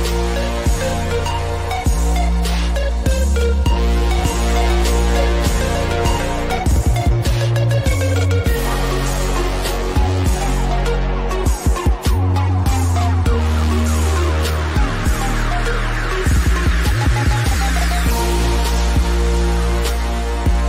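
From 4.19 s to 6.59 s, a doubled audio track appears: a second, full-band copy of the sound runs about half a second behind the first, at roughly the same level. The copy has no decay or added room colour, and it cuts in and out abruptly at both ends, so it reads as a distinct repeat rather than an echo. The likely cause is the same signal reaching the mix twice, once through a slower path or an edit holding two offset copies.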